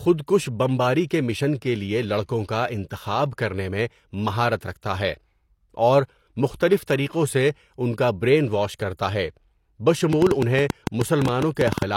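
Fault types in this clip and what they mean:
Pre-echo: just before "طریقوں سے ان کا", around 6.57 to 6.61 s, a sharp attack gets a short hiss running ahead of it for about 31 ms, so the onset comes across smeared rather than crisp. That's the transform codec at work. It spreads its quantisation noise across the whole block, and since the attack lands late in that block, noise sized for the loud part spills into the quiet stretch before it.
Train of clicks: from about 10.13 to 11.83 s there's a run of similar-shaped pulses, roughly twenty of them at about 10 per second, spaced unevenly, and they stand out at about 15 dB above the signal. They tick over the speech and through the gaps too. The likely cause is something injecting pulses repeatedly, such as interference from nearby equipment or a faulty connection or power supply.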